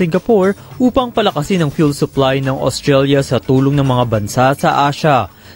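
From the very start and running the whole way through, there's video or display buzz sitting under the sound. A screen or video lead is coupling into the audio path, so you get a 50 Hz buzz locked to the picture's field rate, with a grainy hash riding above it and a thin, piercing whine up at 15.6 kHz from the line scan. It's well down, roughly 35 dB below the wanted sound, but it never lets up.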